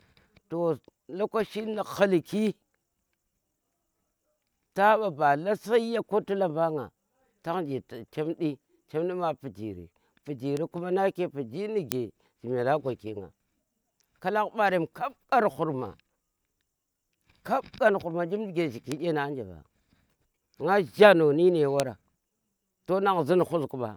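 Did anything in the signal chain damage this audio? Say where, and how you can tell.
Yes. Four bit error spikes, at 10.57, 11.92, 18.92 and 21.80 s: isolated broadband ticks unrelated to the speech, peaking around -19, -1, -13 and -7 dBFS. A flipped bit in storage or a digital link jumps one to three samples by a power of two, then snaps back.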